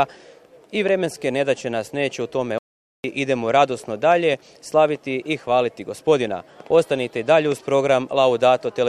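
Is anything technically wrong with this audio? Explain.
Yes. There is a playback stall from 2.58 s to 3.04 s. The audio halts mid-flow and the output drops to silence for about 0.46 s before sound returns. The likely cause is the player running short of buffered data, or its playback thread being blocked, so nothing was delivered to the output until it recovered. It is heard as an abrupt hole in otherwise continuous sound, long enough to register as a distinct interruption rather than a click.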